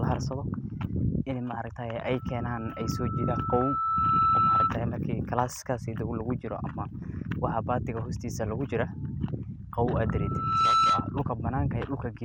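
Loudspeaker feedback squeal at 2.10 to 4.77 s and 10.05 to 11.18 s: the microphone picks up its own loudspeaker, and a 1.3 kHz tone grows until it sits about 10 dB above the speech. It swells over roughly two seconds the first time and under a second the second.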